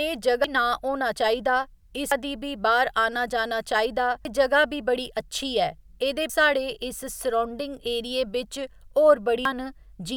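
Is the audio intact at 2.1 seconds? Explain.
No. At about 2.12 s the speech is broken by damaged data in the compressed stream. Some of the encoded bytes there are wrong, so the decoder misreads or rejects that frame, loses sync and hunts for the next valid frame header. The result is a brief chirp, squawk, click or short hole cutting into the speech. On a spectrogram it shows as a thin vertical smear of broadband or oddly tonal energy, and on the waveform as an abrupt, jagged discontinuity.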